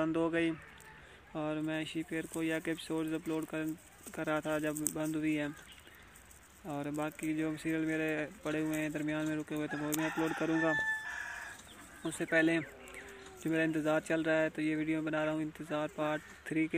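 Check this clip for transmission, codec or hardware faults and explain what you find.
There's one fault: a single loud pop from 10.79 to 10.81 s. It's a sharp click-thump lasting a couple of hundredths of a second, peaking a few decibels above the surrounding sound, which keeps going underneath without a break. That's most likely a voltage spike getting into the chain, from something like a plug, a switch, a static discharge or a driver glitch, and the downstream circuitry then turns it into that short percussive burst.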